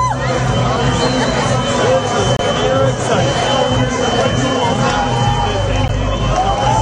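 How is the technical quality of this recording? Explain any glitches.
Two short glitches stand out, and both are a corrupt frame decoded. The first runs from 2.37 to 2.40 s. The second runs from 5.84 to 5.91 s. In each, flipped bits in a compressed frame reached the decoder. It played the frame anyway. Misread gains or codes sent energy to the wrong frequencies. The first spans about one frame, the second about three. Each is heard as a brief chirp, squeak, blip or noise burst, or a short hole.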